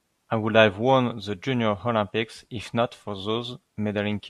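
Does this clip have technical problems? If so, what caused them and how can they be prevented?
No, nothing in this speech clip stood out as a technical problem on listening, so there is nothing here to trace to a cause or to prevent.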